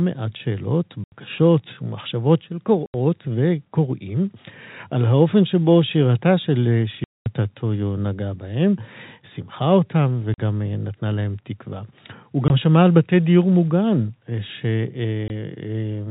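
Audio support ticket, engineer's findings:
Hard-edged dropouts to silence: 1.04–1.12 s, 2.86–2.94 s, 7.04–7.26 s, 10.34–10.38 s, 12.48–12.50 s, 15.28–15.30 s. Packet loss filled with silence. Gaps of 20–220 ms, all multiples of 20 ms, fit 20 ms packets. Band limit at 4 kHz is consistent with the G.711 telephone path.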